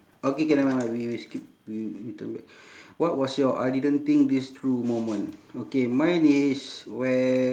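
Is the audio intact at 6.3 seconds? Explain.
Yes, at 6.3 s the speech plays through intact, with no dropout, click, distortion or other break in the sound.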